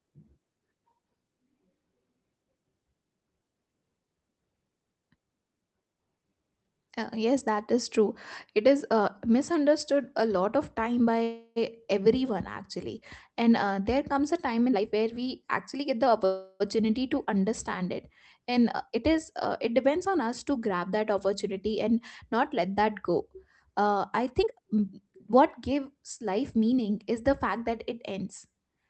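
Right after "a lot of time", at 11.23 s, there's a call audio freeze: about 0.33 s of fading buzz stretched from the last sound, with a tiny silent dip before things resume. It's likely late packets draining the jitter buffer. Nothing's lost, just delayed.

From 14.66 to 16.24 s, following "there comes a time", a jitter buffer speed-up clips out pitch-period slices so the audio runs 118% fast at the same pitch, dropping roughly 0.3 s. It sounds rushed.

Straight after, 16.25 to 16.62 s, another freeze fills about 0.35 s with that same decaying buzz, again likely from stalled packets.

A gentler speed-up at 105% runs from 18.79 to 19.50 s, just before "it depends on us", shaving only a few hundredths of a second.

A stronger one at 115%, from 24.35 to 26.72 s, removes about 0.4 s and audibly hurries the speech. Throughout, the Opus call path keeps the top end capped around 8 kHz.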